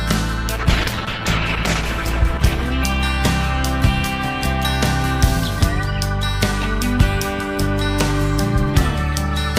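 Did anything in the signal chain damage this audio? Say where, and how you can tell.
Yes. A call bitrate drop at the codec stage, driven by network bandwidth, from 0.58 to 5.01 s: the sound turns coarse and muffled, worst for about 1.37 s, which fits a fall from 128 kbps to roughly 11 kbps. On a spectrogram, the high frequencies vanish and the detail smears until quality returns.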